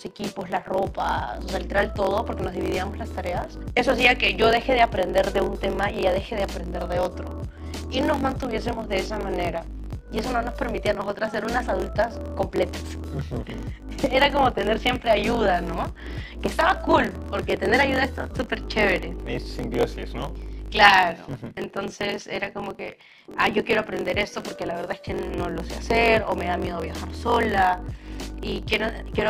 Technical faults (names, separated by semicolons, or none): block size mismatch (truncated)